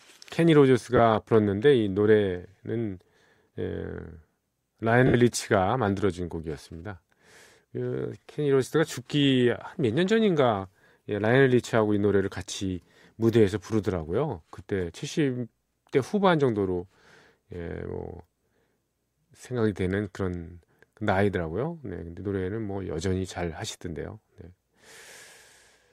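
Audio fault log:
0.97–0.99 s, 5.07–5.14 s, 12.50–12.52 s: lost LE Audio frames. Gaps of 20, 70 and 20 ms are filled with reused, sign-scrambled spectra, showing on a spectrogram as smeared noisy patches where harmonics blur, and the 70 ms one visibly fading in the waveform.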